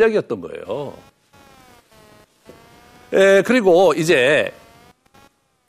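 A short speech recording with computer activity noise running the whole way through: a faint buzzy, chirpy texture pulsing at around 200 Hz, sitting something like 35 dB below the speech. It doesn't follow the talking at all; it tracks whatever the machine is doing. That's processor, graphics or mouse load shifting current on a ground the audio circuitry shares, so the recording interface picks up the computer's own electrical chatter.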